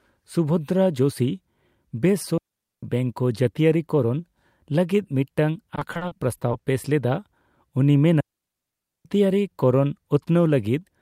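At 2.38 s the speech cuts to near silence for about 0.45 s, until 2.83 s. This is a digital wireless dropout. The radio link lost too much data, and the receiver muted rather than play corrupted audio. The fade is very short. The hole is clean, with no noise burst on either side. A longer one follows at 8.20 s, lasting about 0.85 s to 9.05 s.

Between 5.75 s and 6.61 s comes repeated packet loss, heard as robotic sound. Packets went missing again and again. Each gap, the longest about 40 ms, was patched by stretching the last bit of sound. About a quarter of this stretch, some 220 ms, is patched. The speech turns choppy, with fragments missing.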